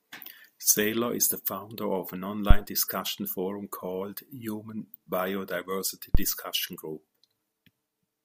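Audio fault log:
2.51–2.61 s and 6.15–6.27 s, phantom power thump: a supply voltage was switched on or off on the live input, and that sudden DC step passed through the coupling capacitors as a deep, low thump, dying away within about 24 ms and 28 ms respectively.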